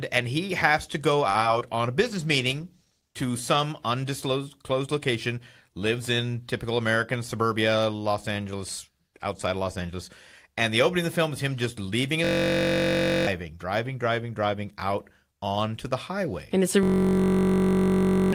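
Right at the start, from 1.29 to 1.37 s, there's a short stall from a late packet. A packet showed up late, the jitter buffer ran dry, and the receiver held the last bit of speech for about 51 ms until it arrived, then picked up where it left off. Nothing's actually lost, but that sound hangs on a touch too long with a faint buzz or dip, and the call runs about 51 ms later from there on.

Right after that come two bits of short concealed packet loss, at 1.41 to 1.43 s and 1.59 to 1.63 s. Each time about 20 ms of speech never made it to the decoder, and the receiver papered over the gap by extending what came before, then blended back in. You hear a quick smear or wobble, and anything brief like a consonant in that spot can simply disappear.

From 6.90 to 7.59 s there's a jitter buffer speed-up. The buffer was holding more audio than it wanted, so the receiver trimmed out tiny pitch-period slices over and over, roughly a twentieth of a second in total. 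Speech runs at about 106% speed with the pitch unchanged, so that stretch sounds a little rushed.

Then the big one, a system hang loop, hits twice: 12.25 to 13.27 s and again from 16.83 to 18.33 s. Something froze while the sound hardware kept cycling the same ring buffer, replaying one 21.33 ms chunk 48 times, then 70 times. That length fits a 1024-sample buffer. At a 46.9 Hz loop rate it comes across as a steady buzz, and about a second, then about one and a half seconds, of real speech are gone underneath it.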